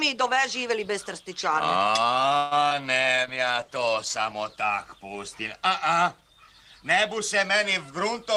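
At 2.37 s the sound hangs for about 140 ms, stretching into a fading buzz before carrying on from where it stopped with nothing lost. This is a call audio freeze: delayed packets likely drained the jitter buffer, and the receiver extended the last sound.

From 2.69 to 2.83 s there is a brief smear and wobble as about 20 ms of audio goes missing. This is short concealed packet loss: the receiver covered the hole by continuing the preceding sound for about 14 ms and blending back, adding roughly 15 ms overall.

From 3.18 to 5.88 s the sound turns rough and watery, dullest for about 1.4 s. This is a call bitrate drop: the encoder's rate fell from 32 to 15 kbps, coding more coarsely and trimming high frequencies until it recovered.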